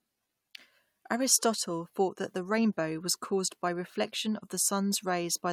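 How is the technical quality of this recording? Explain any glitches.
No audible glitches or technical faults anywhere in the recording.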